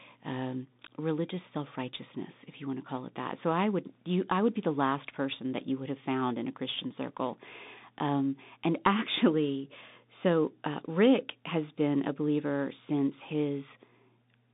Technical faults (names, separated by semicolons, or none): Bluetooth CVSD headset codec